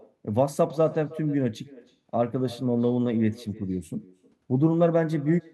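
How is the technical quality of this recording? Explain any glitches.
The recording carries one fault, present for the whole clip: echo with no canceller. The far end is evidently playing the call over a loudspeaker, its microphone is capturing that playback, and no echo cancellation removes it before it returns through the network. Every phrase of speech is therefore followed, roughly a third of a second later, by a faint copy about 22 dB down, sounding thin, like a hollow shadow trailing the talker.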